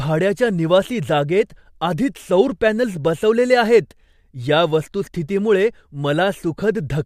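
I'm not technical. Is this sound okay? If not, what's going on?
Yes, this sound is okay; there's nothing going on that needs fixing.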